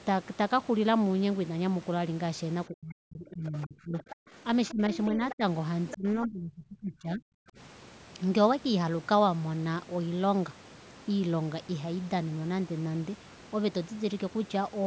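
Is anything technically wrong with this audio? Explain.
Yes. Speech suppressed in double talk occurs from 2.68 to 4.35 s, 4.71 to 5.42 s and 5.95 to 7.39 s. The talker dips by up to roughly 40, 20 and 30 dB, likely because the echo canceller turned everything down while both sides spoke.

The other side's voice leaks through at 3.47 to 3.67 s, 4.0 to 4.15 s, 4.68 to 5.35 s and 5.89 to 5.97 s. It is a second voice about 25, 20, then 15 dB under the talker, likely loudspeaker echo the canceller missed. It is a separate voice, not a reverb tail. The call microphone processing tops out near 8 kHz.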